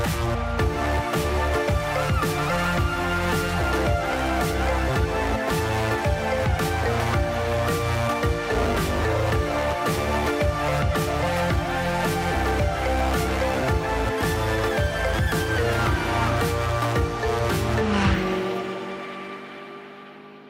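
No technical faults can be heard anywhere here.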